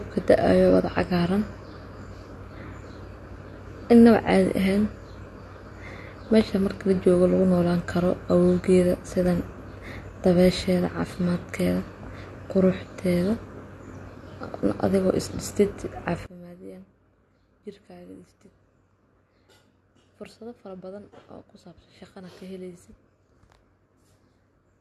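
From 16.26 s to the end at 24.81 s, one channel inverted is the likely cause: one side of the stereo pair appears to have flipped polarity, so when the two channels are combined the shared content cancels. The speech, sitting in the centre, collapses by about 22 dB, leaving only a faint residue of whatever differed between left and right.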